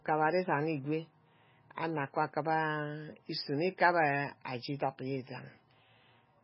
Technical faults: MP3 compression

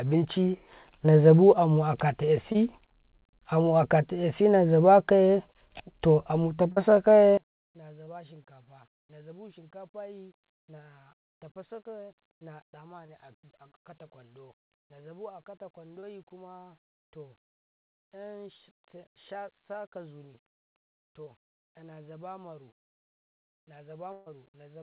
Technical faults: short concealed packet loss; one channel inverted; burst of packet loss

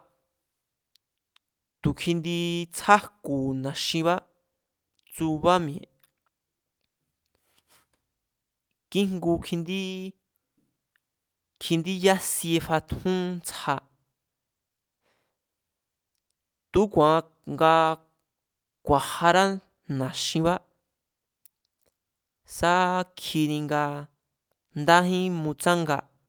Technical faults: clock drift between sender and receiver; repeated timing corrections

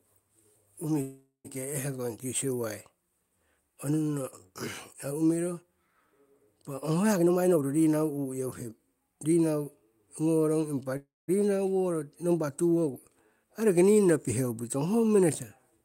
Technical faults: call audio freeze; jitter buffer speed-up

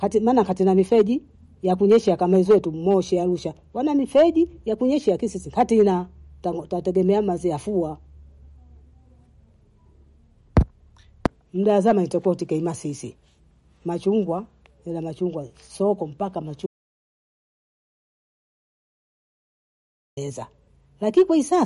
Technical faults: MP3 compression; audio dropout to silence

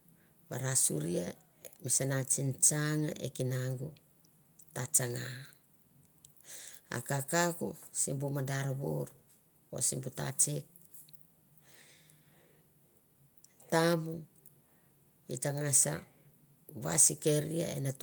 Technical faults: none

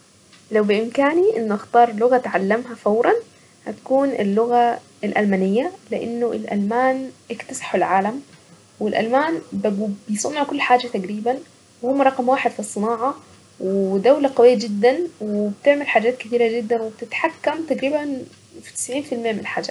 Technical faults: none

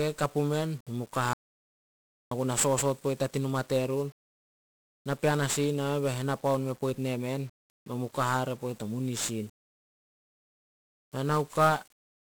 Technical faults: 1-bit DFPWM compression; audio dropout to silence

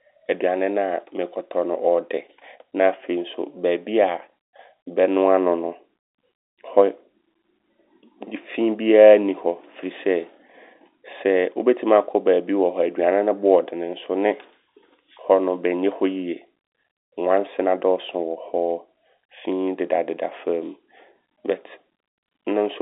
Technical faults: none

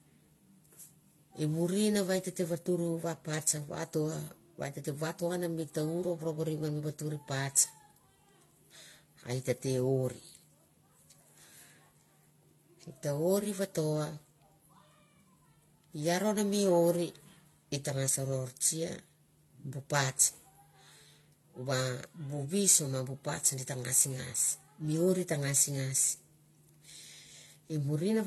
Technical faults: transcoding between lossy codecs

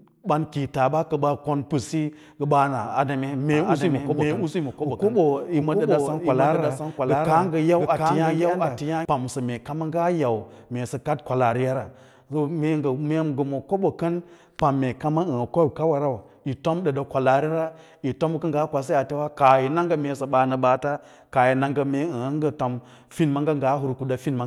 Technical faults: doubled audio track

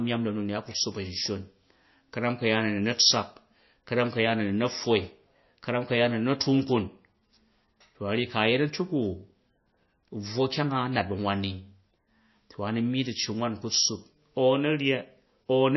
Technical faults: MP3 compression

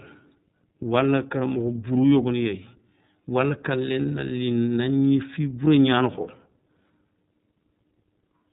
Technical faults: iLBC codec; lost iLBC frames

